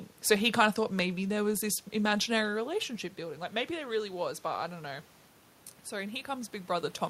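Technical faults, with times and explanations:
2.58 to 5.13 s, automatic gain rising: after "there was this imaginary", the talker moves away and the input falls by about 11 dB. The gain control slowly adds about 3 dB over 2.5 s, so voice and room noise swell together.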